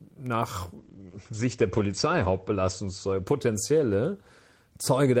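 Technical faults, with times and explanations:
0.78–5.03 s, call bitrate drop: the encoder falls from 32 to 13 kbps. Content above 8 kHz disappears, so the speech turns muffled and coarse.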